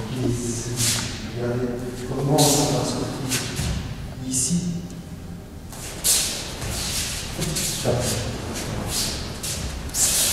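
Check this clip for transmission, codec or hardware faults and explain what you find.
No transmission, codec or hardware faults.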